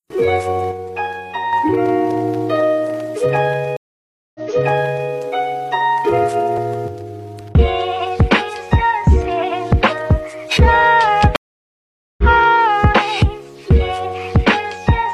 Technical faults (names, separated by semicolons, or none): one channel drops out; stream reconnect